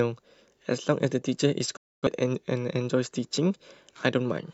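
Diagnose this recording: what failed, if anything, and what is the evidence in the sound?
A digital broadcast dropout mutes the speech from 1.76 s to 2.07 s, with a fast 8 ms fade into silence. At the receiving decoder, frames failed or went missing, about a quarter second, consistent with six lost frames, so output muted until valid frames resumed.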